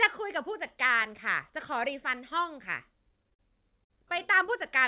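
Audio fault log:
3.34–3.42 s and 3.84–3.93 s: short stall from a late packet, twice. The jitter buffer ran empty, so the speech was held for 48 ms and 60 ms, with nothing lost.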